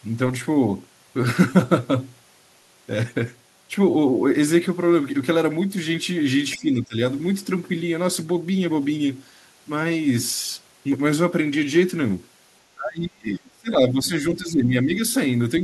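At 6.57 to 7.0 s the speech dips by roughly 15 dB. At 12.75 to 14.12 s it falls much further, around 30 dB. At 14.33 to 15.02 s a shallower dip of about 10 dB follows. Each sounds like speech suppressed in double talk. The likely cause is an echo canceller that heard both sides at once. It could not tell this talker from loudspeaker echo, so it turned the talker down.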